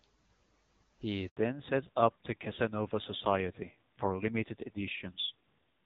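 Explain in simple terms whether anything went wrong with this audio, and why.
Handover gap, 1.29 to 1.37 s: the phone switched networks and no speech arrived for about 80 ms, so the sound briefly drops to silence.

Fallback to narrowband, from 1.37 s to the end: the call left HD Voice, which sounds clear before the switch, for an older codec. Everything above 4 kHz disappears, leaving the speech duller and rougher.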